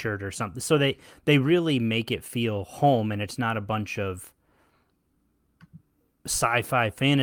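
No technical faults can be heard anywhere in the speech. There is nothing to point to at any moment and no mechanism to explain.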